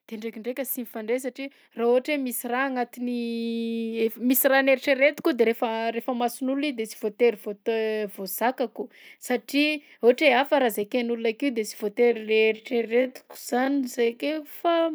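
From 0.09 to 4.14 s, automatic gain rising: the gain control lifts a too-quiet input by about 10 dB, so voice and background swell together. From 11.95 s to the end, a time-stretched section plays at 0.56× speed with pitch held, likely from stretching software repeating short pieces, so the pace abruptly drags.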